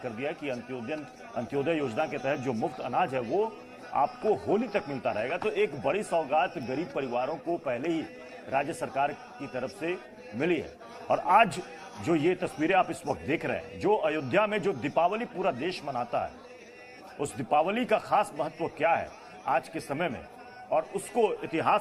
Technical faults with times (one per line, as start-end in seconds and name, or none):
none